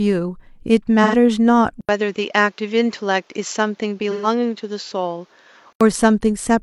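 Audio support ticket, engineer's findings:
AAC frame loss with concealment, 1.03 to 1.14 s: smeared, noisy patch about 85 ms long, consistent with two lost frames. Decoder rebuilding from the last good spectrum, so the gap is filled rather than silent.

AAC frame loss with concealment, 4.10 to 4.26 s: same smeared texture, longer at 128 ms, fits three lost frames. Repeated concealment from the last good spectrum with no fresh data.

Input switched to a poorer device, 1.81 to 5.81 s: 80 ms dropout at the switch, then dull band-limited sound, nothing above 7.6 kHz. New noise floor about 40 dB under the signal, level roughly unchanged. Likely cause: capture routed to a narrower-band microphone or headset profile.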